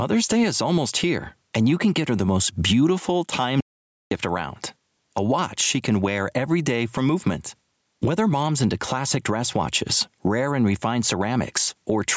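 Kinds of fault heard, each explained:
Gain pumping: The level keeps ducking under each loud syllable, a swing of around 10 dB, so the speech sounds squashed and breathing. This is likely from gain set far too high, with a fast limiter clamping down on every peak.
Audio dropout to silence: Right after "her the most beautiful" the speech cuts to dead silence from 3.61 to 4.11 s, about half a second with no room tone at all, and what was said there is gone. The likely cause is a lost input while silence kept being recorded.
Electrical switching spike: At 5.18 s a sharp, very brief snap lands on top of the speech just before "watch she can wear". It sits over the sound rather than replacing it, and is likely an arc from a nearby switch, motor or static discharge picked up by the audio line.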